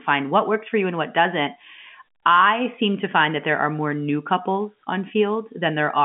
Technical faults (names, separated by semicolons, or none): none